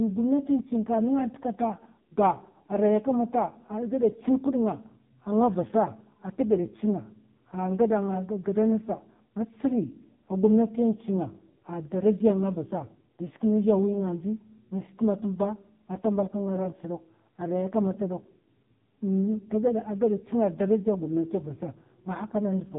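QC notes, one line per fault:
throughout: AMR narrowband mobile codec. The speech is squeezed into a mobile-phone channel with nothing above 3.8 kHz, and heavy damage makes it buzzy and synthetic. This fits a low AMR-NB mode, around 5.15 kbps, where a vocal-tract model fed by sparse pulses replaces the real waveform. That buzz sets it apart from a plain low-pass filter.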